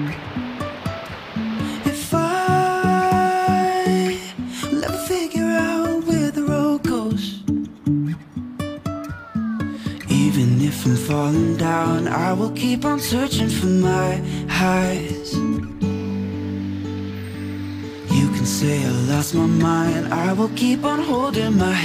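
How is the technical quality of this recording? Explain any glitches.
Nothing stood out as a technical problem on listening to this recording.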